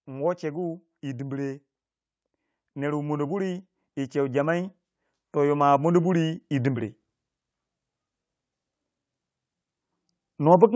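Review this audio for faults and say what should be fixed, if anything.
Sample clock jitter runs through the whole recording. The converter's clock wanders by a few microseconds, so each sample is taken slightly early or late, and the error grows with the waveform's slope. The speech carries a faint roughness, roughly 40 dB below the signal, strongest on loud, bright sounds and absent in pauses. Clocking the converter from a stable, low-jitter reference would prevent this.

Automatic gain rising occurs three times: 0.05 to 1.54 s by about 3 dB, 2.61 to 4.77 s by about 4 dB, and 5.33 to 6.95 s by about 4 dB. Each time the gain control judged the input too quiet and raised its gain gradually, so speech and background swell together over about 1.5 to 2.2 seconds. Setting a proper input level, or disabling or slowing the automatic gain control, would prevent these swells.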